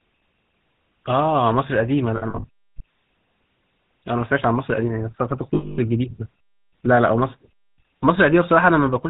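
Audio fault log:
Throughout: GSM full-rate codec. The speech has a buzzy, gravelly roughness and nothing above 4 kHz, so it sounds dull and narrow. The coder models the vocal tract as a filter and drives it with a sparse, regularly spaced pulse train that keeps only every third excitation sample. The fine structure of the voice is lost and replaced by that coarse buzz, which is plainly audible here and fits the 13 kbps full-rate coder.
2.16 to 2.45 s: lost GSM frames. About 160 ms of the signal drops out in short gaps scattered over 280 ms, with the longest gap somewhere around 70 ms. Each missing stretch is filled by repeating the settings of the last good frame, so the sound is held as a brief rough, metallic ring instead of going silent. The pattern points to eight 20 ms frames.
5.54 to 5.79 s: lost GSM frames. This is a single continuous loss of 240 ms, which points to twelve consecutive 20 ms frames. 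The last good frame is repeated, so the sound hangs as a metallic, ringing smear before normal decoding resumes.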